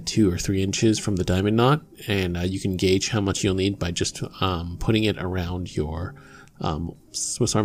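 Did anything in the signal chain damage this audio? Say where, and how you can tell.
No, nothing in the signal chain damaged this audio.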